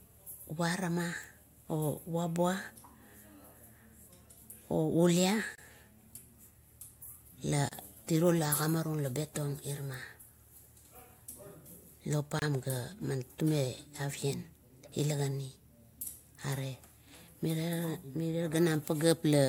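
Speech drops out briefly at 5.55, 7.69 and 12.39 s. Each dropout lasts 26 to 28 ms. These are gaps at a join of encoded pieces. Separately encoded segments were joined untrimmed, leaving encoder delay and padding as silence. Edges are smeared by the codec, and speech resumes where it stopped.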